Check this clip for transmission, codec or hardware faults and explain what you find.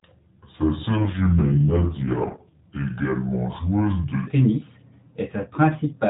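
One transmission fault shows up, an AMR rate drop, heard over the clip's narrowband mobile speech, which carries light coding roughness throughout.

From 0.96 s to 2.61 s the speech turns rougher, buzzier and more synthetic, with no gap and no change in bandwidth, then clears again. This is an AMR rate drop: a weak radio link makes the network push the codec to a lower mode, giving the freed bits to error protection, so each 20 ms frame describes the voice more crudely. The degradation fits a step down from about 12.2 to 4.75 kbps.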